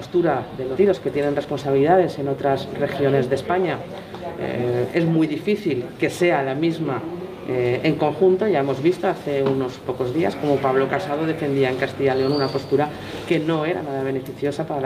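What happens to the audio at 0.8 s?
Around 0.75 to 0.86 s there's a skip ahead: a chunk of audio got dropped while later material was already queued, so playback lurches forward with no gap. Roughly seven-tenths of a second goes missing, and the two sides butt together almost seamlessly.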